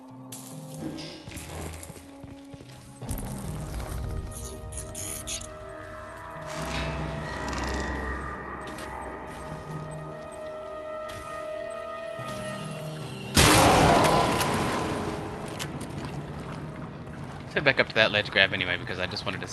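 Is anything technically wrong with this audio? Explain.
No, nothing is technically wrong: the audio has passed through a call codec and jitter buffer working as intended, with ordinary coding noise and a top end that stops around 12 kHz.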